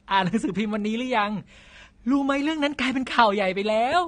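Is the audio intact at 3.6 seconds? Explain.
No. At 3.6 s, as throughout the clip, the speech carries plainly audible AAC compression damage, likely from a low-bitrate AAC-LC encode around 32 kbps. The lowered cut-off strips everything above 9.7 kHz and coarse quantisation thins the spectrum, leaving sibilants dull, smeared and fizzy.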